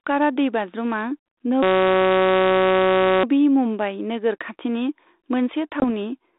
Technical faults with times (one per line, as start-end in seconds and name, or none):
1.63-3.24 system hang loop
5.80-5.85 packet loss on an ADPCM call